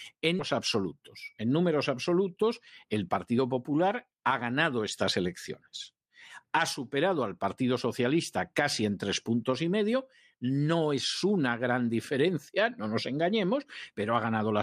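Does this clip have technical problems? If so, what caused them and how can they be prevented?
Yes. A skip ahead at 0.39 s drops roughly 0.4 s of speech, joining both sides directly. A deeper jitter buffer that drains gently prevents this.

A jitter buffer speed-up runs from 2.85 to 3.39 s at 105% speed. It trims a few tens of milliseconds of pitch periods. Smoother network delivery prevents it.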